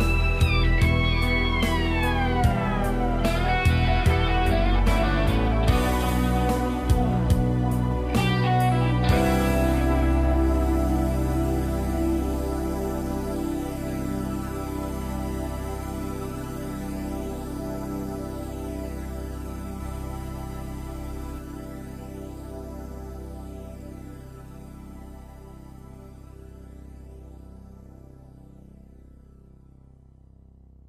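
From 19.8 s to 21.38 s a doubled audio track appears: a second, full-band copy of the sound trails the original by roughly a third of a second, around 5 dB quieter, with no decay or room colour. The likely cause is the signal being captured again through a slower path. It sounds like a crisp slapback echo that switches on and off abruptly. On a spectrogram, every feature repeats as a shifted duplicate; the waveform shows stacked offset envelopes.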